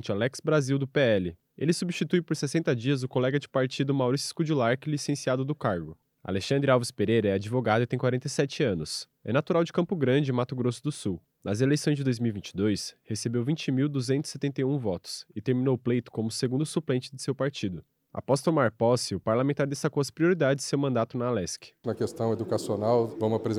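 No technical faults are audible.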